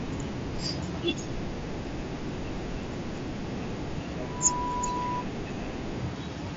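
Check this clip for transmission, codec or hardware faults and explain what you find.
One fault stands out in this speech recording: a feedback squeal. The band-limited sound of the mSBC headset link is also audible, with nothing above about 7.7 kHz and slight graininess on louder syllables.

Loudspeaker feedback squeal, 4.22 to 5.27 s: a microphone is picking up the loudspeaker it drives, and at 985 Hz the loop gain rises above one, so that frequency keeps amplifying itself. It swells from nothing over roughly a third of a second into a steady, piercing tone that sits about 5 dB above the speech. The whole event lasts about a second.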